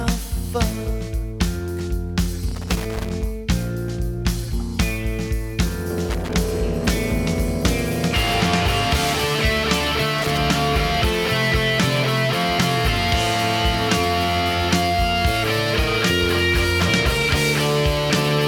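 Irregular bursts of crackle and scratching chop through the audio at 2.48–3.23 s, 6.09–6.33 s and 10.18–10.38 s: loose connector crackle, from a worn or dirty contact making and breaking.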